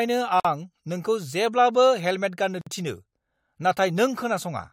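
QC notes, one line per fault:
0.40–0.45 s: gap at a join of encoded pieces, a 48 ms silence with smeared edges; the speech resumes where it stopped, as encoder start delay and last-frame padding were left in.
2.61–2.67 s: gap at a join of encoded pieces, a similar 52 ms hole at another untrimmed join.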